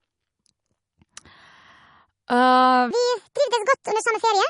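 MP3 compression damage is plainly audible across the whole speech clip. Nothing remains above 10.6 kHz. Weak detail flickers in and out, giving a watery, swirly texture and smeared consonant onsets. The likely cause is a low MP3 bitrate, around 40 kbps.

From 2.91 s to the end, a section plays at the wrong speed. It runs 1.63 times too fast, so speech turns hurried and rises by roughly ten semitones. The likely cause is playback against the wrong clock, shifting pitch and tempo together.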